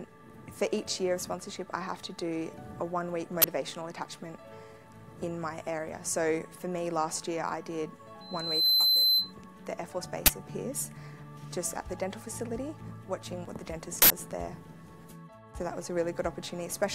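At 3.42 s there's a sharp crack of harsh digital noise lasting until 3.44 s. That's an uninitialised buffer: a 20 ms block got sent to the output before any audio had been written into it, so whatever junk was sitting in memory played out as samples. The result is a loud, gritty burst that has nothing to do with the surrounding sound.

From 8.21 s to 9.34 s you get a classic loudspeaker feedback squeal. A tone at 4.1 kHz swells up over roughly half a second and settles at about 15 dB above the rest of the audio. A microphone is hearing the speaker it feeds, and at that one frequency the loop gain tops one, so the tone keeps feeding itself until the loop is broken.

The uninitialised buffer problem comes back twice. At 10.26 to 10.28 s there's another 20 ms burst of raw memory garbage. At 14.02 to 14.10 s a longer 80 ms block goes out unwritten, so that burst of noise hangs on noticeably longer than the first two.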